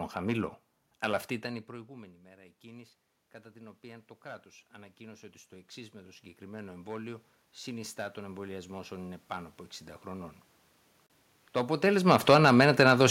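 Throughout the speech there is a brittle crackle riding on the loudest syllables, a thin fizz that catches only the peaks rather than coating every sound. That is hard clipping. The signal is driven about 8 dB past what a stage in the chain can carry, so a small share of the waveform's peaks are sheared flat. Those squared-off tops throw harmonics high into the spectrum, which is why the damage sounds like crackle and not like simple loudness.

From 1.43 to 3.0 s the voice and the room noise behind it swell together, gently, by about 3 dB. A longer, larger swell follows from 3.52 to 10.4 s, lifting both by about 14 dB. This is automatic gain rising. When the talker drew back around 1.5 s, the level reaching the microphone fell by about 21 dB, and the gain control responded by slowly turning itself up. Because it cannot tell voice from background, it brings the room noise up right along with the speech.

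At 11.07 to 11.10 s the sound drops out for 33 ms and then resumes. It is a clean gap, not a fade. This is most likely a Bluetooth stall. Interference delayed the radio packets, the headphone buffer emptied, and playback waited for the missing audio before carrying on.

From 11.83 to 12.76 s the level sinks by about 7 dB, with the background falling alongside the voice. This is automatic gain falling. After the talker moved around 11.5 s, the gain control pulled its gain back down gradually.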